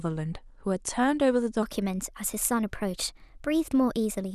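At 1.63 s the speech abruptly becomes a section at the wrong speed, running about 1.17 times too fast through to the end. Pitch and tempo jump together, roughly three semitones higher, so the voice turns thin and hurried. The likely cause is the segment being played against a mismatched clock. On a spectrogram, harmonics and formants step upward at 1.63 s and syllables compress in time; the waveform shows shorter periods from that point.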